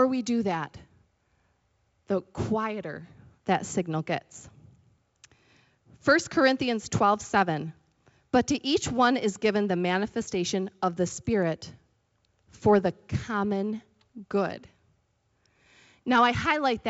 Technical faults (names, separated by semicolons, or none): none